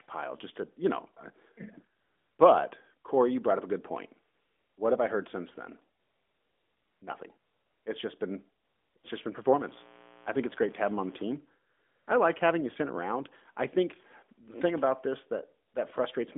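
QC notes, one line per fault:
2.00–2.38 s, 4.34–4.78 s, 6.00–7.02 s, 7.38–7.86 s, 8.64–8.96 s, 8.98–9.04 s, 11.70–12.08 s, 15.68–15.74 s, AMR comfort noise: in these pauses the real background gives way to a smooth, even hiss that switches in and out. The phone judged the talker silent and stopped sending speech frames, so the receiver synthesised filler noise from a rough level-and-spectrum sketch. The longest gap lasts about 1 s.
9.58–11.37 s, mains buzz: a steady, raspy buzz sits about 25 dB below the speech. Sharp switching spikes from 60 Hz mains leak in twice per cycle, and their harmonics stack up across the band. The light 12.2 kbps AMR-NB coding keeps the voice within a 250–3500 Hz phone band.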